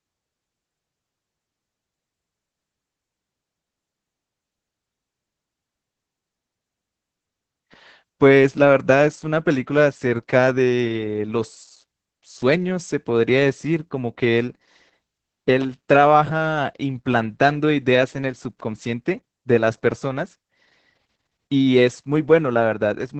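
Opus voice compression runs throughout. Speech is band-limited near 8 kHz, hoarse and robotic. Such heavy damage fits a low bitrate around 10 kbps.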